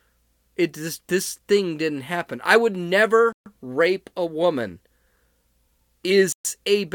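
A speech recording that twice falls fully silent, at 3.33 to 3.46 s (134 ms) and 6.32 to 6.45 s (125 ms), then resumes, likely a Bluetooth stall from an emptied headphone buffer.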